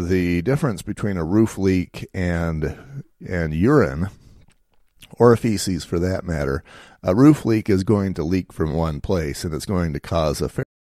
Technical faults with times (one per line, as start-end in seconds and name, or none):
10.63-10.96 cut-off end